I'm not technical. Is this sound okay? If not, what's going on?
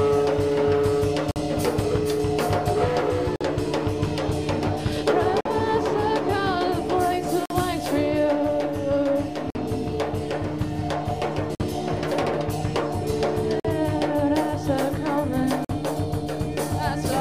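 No. This is a gap between chunks: the audio arrives in 2-second pieces, and about 48 ms of silence sits between pieces, so the sound briefly drops out at 1.31, 3.36, 5.41, 7.46, 9.50, 11.55, 13.60 and 15.65 s.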